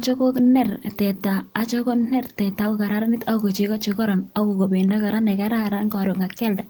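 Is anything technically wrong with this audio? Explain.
No, nothing technically wrong.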